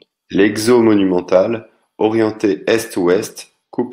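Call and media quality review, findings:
Bluetooth SBC bit pool drop, 2.31 s to end: speech treble dulls, gritty noise rises. Fewer bits starve the top sub-bands; fits bit pool falling from 28 to 13, near 102 kbps.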